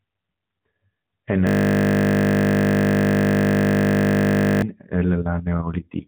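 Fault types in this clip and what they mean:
System hang loop: the system froze while the hardware kept replaying one 20 ms slice, giving a steady 50 Hz buzz from 1.47 to 4.62 s.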